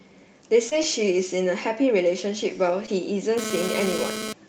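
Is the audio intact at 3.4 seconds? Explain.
No. From 3.38 s to 4.33 s, GSM phone buzz sits over the speech at about 6 dB below it. A nearby 2G handset, here moving data, transmits in pulses about 217 times a second, and the audio circuitry rectifies them into a harsh, rasping 217 Hz buzz with dense harmonics. Unlike mains hum, which is a smooth 50 or 60 Hz drone, this buzz is gritty and pulsed, and it stutters on and off rather than holding steady.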